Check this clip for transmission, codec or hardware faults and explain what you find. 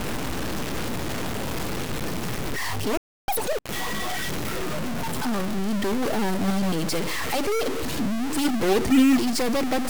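Three faults are audible in this speech clip: a constant distortion throughout, a gap near 3 s, and a brief sped-up burst right after it.

Stuck bit, throughout: the speech carries a constant distortion, and the pauses are filled with noise instead of silence. The likely cause is one data bit held at a fixed value, which shifts roughly half of all samples by that bit's weight and scrambles quiet passages.

Playback stall, 2.97 to 3.28 s: the sound cuts out mid-flow for about 0.31 s and then resumes. This points to the player's output likely running dry, or its thread being blocked, so nothing was sent until it recovered.

Catch-up at higher speed, 3.28 to 3.59 s: the speech rushes at double speed with pitch raised by roughly ten semitones, then settles back to normal. The player is resampling its backlog to recover the time lost in the preceding stall.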